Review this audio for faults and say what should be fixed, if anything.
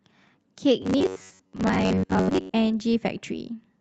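From 0.82 to 2.54 s the speech takes on a rigid metallic buzz fixed at 94.1 Hz, still loosely following the syllables. This is likely robotic sound from repeated short buffers: audio arrives too seldom, so most of the time a chunk of roughly 10.6 ms is replayed while real audio is skipped. To prevent it, keep the audio callback fed on time, with a larger buffer or higher thread priority, so underruns never trigger repetition.

From 2.21 to 2.29 s, inside that stretch, there is a burst of packet loss. About 60 ms of audio never arrived in time, and the receiver covered 61 ms by extending and fading the last sound before resuming further along. Preventing it means adding forward error correction or a deeper jitter buffer so that lost or late packets in a burst can be recovered.

Immediately after, from 2.29 to 2.33 s, short concealed packet loss drops another 20 ms, filled with 13 ms of continued sound and blended back. 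This heard as a brief smear at the join. Enabling in-band FEC on the Opus path, whose band is limited to 8 kHz, would help recover these isolated packets.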